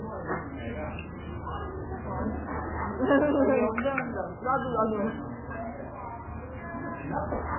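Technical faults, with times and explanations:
Throughout, MP3 compression: the audio sounds watery and swirling, with smeared attacks and nothing above 3 kHz. This is likely heavy MP3 coding at a starved bitrate, consistent with about 8 kbps. The encoder cuts the treble and drops weak frequency lines, which flicker between frames.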